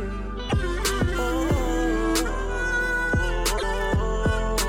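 At 0.46 to 0.53 s and again at 3.54 to 3.64 s there's damaged data in the compressed stream: the decoder hits bad frames, loses sync, and spits out a short glitch.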